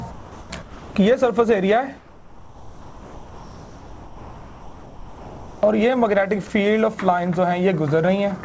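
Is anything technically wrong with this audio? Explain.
Yes. Three kinds of fault can be heard.

Comfort noise in place of the background appears from 0.11 to 0.50 s, 0.62 to 0.95 s, and 1.97 to 5.63 s. The real background gives way to a smooth, featureless hiss. It is about 4 dB quieter in the first two stretches and about 5 dB quieter in the long third one. The likely cause is discontinuous transmission. The sender stopped sending during pauses, and the receiver filled the gaps with synthetic noise that only roughly matches the background.

Sound dropped by the voice detector occurs from 6.47 to 6.50 s. About 20 ms of real sound vanishes inside a 30 ms patch of steady noise, then returns. The likely cause is the sender's voice detector treating a quiet stretch as background and pausing transmission. The receiver then played comfort noise where the sound should have been.

Dropped samples cause a single sharp click at 7.18 s. 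Only a handful of samples, around a tenth of a millisecond, are missing. The waveform jumps straight to a later value. That step is far too brief to remove any audible sound, but it shows up as a thin vertical line across the spectrum. The likely cause is a tiny loss in the sample stream.

The audio also passed through a call codec, which fits G.722. Nothing is heard above 8 kHz.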